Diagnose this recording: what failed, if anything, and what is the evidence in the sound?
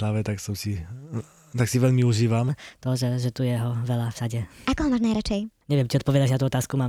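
Right after "tak si veľmi", at 2.49 s, the speech jumps about three semitones higher and runs 1.22 times faster, staying that way to the end. Pitch and tempo shift together, so it's a section at the wrong speed, likely from playback running on the wrong clock.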